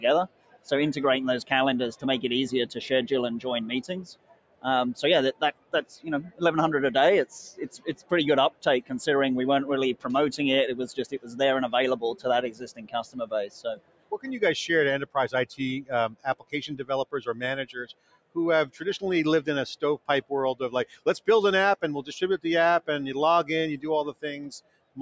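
A speech-tuned noise suppressor left running on non-speech sound keeps lowering steady material by about 20 dB, so the level pumps rather than dropping out cleanly. The sound cut by the noise suppressor sinks by about 20 dB at 0 to 0.72 s, 3.82 to 8.91 s, 11.12 to 18.82 s, 19.98 to 21.28 s and 24.13 s to the end. Onsets survive while held portions and decays fade, unlike a dropout, which silences everything. The call microphone path passes nothing above 8 kHz.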